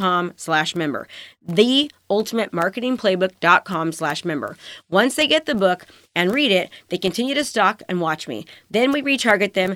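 Nothing in the speech stood out as a technical fault on listening.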